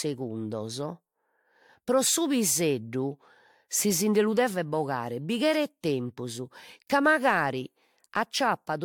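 Throughout the speech, the audio has likely suffered generation loss: it was decoded and re-encoded around three times with a codec that sounds like AAC near 96 kbit/s, each pass requantising on a shifted frame grid. It sounds swirly and hollow, attacks smear, and nothing remains above 18.8 kHz.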